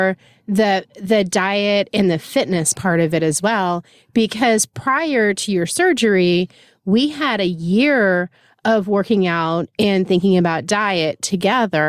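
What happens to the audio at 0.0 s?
Nothing goes wrong at 0.0 s: the audio is intact, with no dropout, click or other fault at that point.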